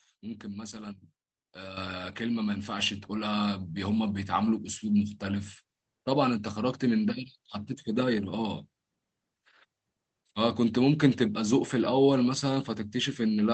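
Speech carried over a WebRTC call path with Opus coding and audio ending near 8 kHz, where the microphone volume was stepped up at 1.77 s (about 8 dB) and again at 2.79 s (about 3 dB). Voice and background noise jump together instantly, which separates this from a gradual gain ramp.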